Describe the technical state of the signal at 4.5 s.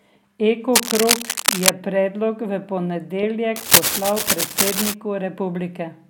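At 4.5 s the speech is covered by cable scratch noise, running from 3.56 to 4.95 s: dense, uneven scratching somewhat louder than the voice, likely from a worn cable or connector being moved. Its irregular, rustling bursts distinguish it from steady hiss or isolated clicks.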